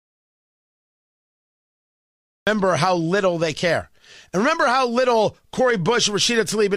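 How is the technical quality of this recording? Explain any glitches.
The recording opens with an audio dropout to silence. From the very start to 2.47 s there is nothing at all. It is plain silence, with no room tone or hiss. The speech then begins abruptly with "how little they care", already mid-flow. The gap was already under way when the clip starts. The likely cause is a lost input, such as a disconnected device, a failed link or a mute, while the recorder kept writing silence. Anything spoken during that stretch is gone.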